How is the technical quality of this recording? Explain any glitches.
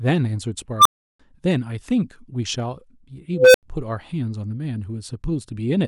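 The speech is marred by two unstable filter glitches. At 0.78 to 1.20 s, a tone near 1 kHz swells over 75 ms into a loud squeal, then drops to 341 ms of silence. At 3.33 to 3.63 s, a tone near 500 Hz builds more slowly, over 210 ms, then falls silent for 85 ms. A recursive filter with bad coefficients fed on itself and grew without bound. It clipped, overflowed and cut out until it reset.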